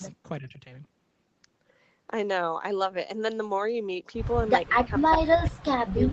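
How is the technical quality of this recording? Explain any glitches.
The recording has one glitch near the start. Between 0.4 and 0.62 s, the speech dips for roughly a fifth of a second, falling by about 10 dB at its deepest. This is most likely speech suppressed in double talk. The echo canceller heard both ends active at once. It could not tell the near talker from the loudspeaker echo, so it pulled everything down. The voice sounds briefly ducked. The audio stops at 8 kHz, which fits a wideband Opus call at a modest bitrate.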